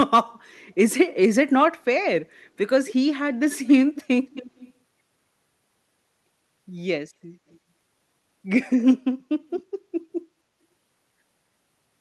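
An echo canceller on the loudspeaker side likely failed to remove all of its microphone pickup, so this speech has an echo leak: a faint copy of the voice returns 267 ms late. It appears in short scraps at 2.87–2.94 s, 3.95–4.03 s and 7.50–7.58 s, and as a longer trail from 4.24 to 4.71 s. Most sit about 15 to 20 dB below the speech. The one at 7.5 s is barely audible, about 40 dB down.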